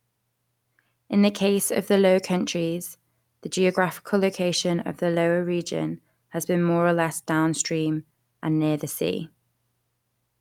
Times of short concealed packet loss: none

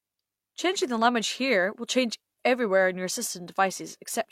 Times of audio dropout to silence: none

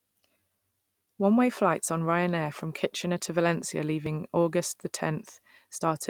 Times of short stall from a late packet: none

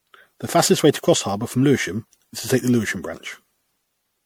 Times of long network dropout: none

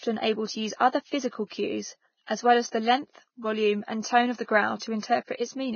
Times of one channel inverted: none

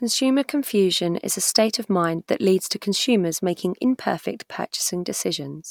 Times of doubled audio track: none

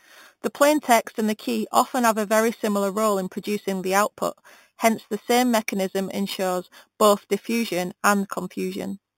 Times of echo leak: none

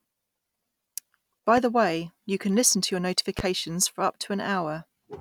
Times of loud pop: 1.57-1.61, 3.39-3.42

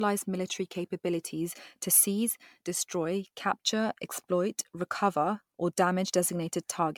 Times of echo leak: none

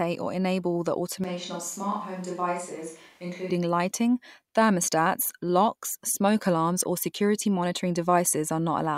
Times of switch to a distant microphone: 1.24-3.50

